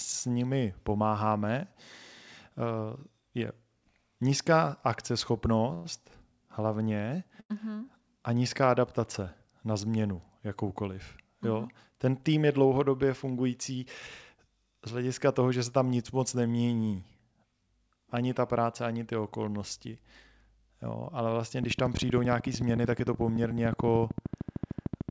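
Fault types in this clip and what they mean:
Call audio freeze: At 5.74 to 5.87 s the sound stops moving forward for about 106 ms. The last sound is held as a fading buzz and never drops to silence. This is likely a brief hold-up of incoming packets that drained the jitter buffer, so the receiver carried the final sound on until data resumed. The audio then picks up exactly where it left off, adding a gap without losing any content.
Short stall from a late packet: At 7.41 to 7.52 s a single packet arrived after it was due and the jitter buffer ran empty. The receiver bridged about 92 ms by stretching the preceding sound, which comes across as one sound held unnaturally long with a slight buzz or dip. Speech then continues from the same point, so nothing is dropped, but the timing visibly lags at that moment.
Jitter buffer speed-up: From 12.13 to 12.65 s the speech runs at about 113% speed while its pitch stays put. 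The jitter buffer had filled beyond its target. To pull the delay back down, the receiver cut many tiny pitch-period-length slices, around 70 ms in total, and the passage sounds briefly hurried. All of this rides on a call codec path that leaves nothing above 8 kHz, consistent with G.722.
Train of clicks: From 21.64 s to the end of the clip, a run of near-identical pulses ticks at a steady 13.3 per second, peaking about 10 dB above the speech. The clicks continue through pauses just as through talking. That fixed rate and uniform shape point to an external pulse source layered on the audio, likely electrical interference or a faulty connection or power supply rather than anything in the call chain.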